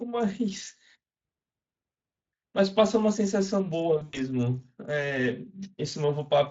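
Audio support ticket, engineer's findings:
Brief buzzy smear with a dip in level at 1.91 to 1.95 s. VoIP packet loss concealed by the speech codec: about 40 ms missing, consistent with two 20 ms frames, filled by extrapolating the last pitch and filter at falling gain.

Longer stretched, tonal fade from 3.97 to 4.23 s, with weak, distorted sound after the gap. Same packet-loss concealment: about 160 ms lost across 200 ms, longest run 100 ms. Decoder state recovers slowly after packets resume. Speex path itself carries only light coding damage.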